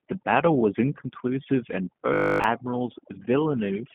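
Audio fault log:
throughout: overdone noise removal. The background has dropped, scattered with twinkling specks. Noise reduction set far too strong has turned down frequency bands close to its noise estimate, taking quieter parts of the speech with them.
throughout: G.729 codec. Nothing passes above 3.4 kHz, and the band sits between 150 Hz and 3.4 kHz. The speech stays intelligible but plainly rough and synthetic. It has been rebuilt from a vocal tract model and sparse pulses, which fits an 8 kbit/s codec.
2.14 to 2.44 s: robotic sound from repeated short buffers. For about 0.3 s the speech becomes a rigid, metallic buzz at 50 Hz that only roughly follows the sound. All of it is repetition, likely from a 20 ms buffer replayed while new audio failed to arrive.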